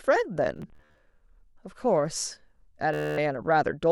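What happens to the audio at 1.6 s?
Nothing goes wrong at 1.6 s; the speech continues intact through that moment with no dropout, click or other fault.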